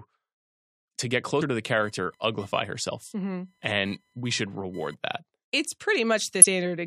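Right after "to the", from 1.80 to 4.94 s, there's computer activity noise: a buzzing, chirping or scratching near 1 kHz, well under the speech, as changing computer load shifts the shared ground. Then at 6.42 to 6.45 s, damaged data in the compressed stream makes the decoder lose sync briefly, leaving a quick glitch.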